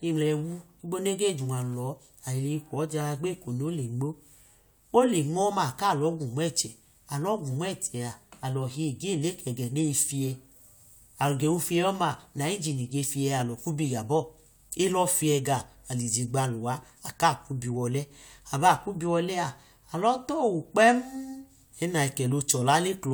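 No faults heard in this speech.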